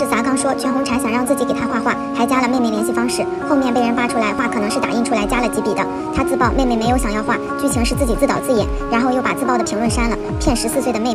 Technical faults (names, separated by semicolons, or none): none